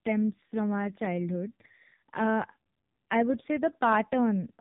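Buzzy, synthetic speech with nothing above 3.7 kHz runs throughout: heavy AMR narrowband mobile codec damage, which fits AMR-NB squeezed to about 5.15 kbps.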